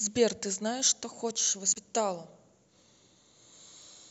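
From 0.80 to 3.82 s, periodic USB or driver dropouts occur: something stalls the audio driver about every 1.02 s, blanking roughly half a millisecond each time, giving about four evenly spaced ticks in the speech. Between 1.71 and 1.77 s, damaged data in a compressed stream forces the decoder to lose frame sync and resynchronise, producing a brief chirp, squawk, click or short hole.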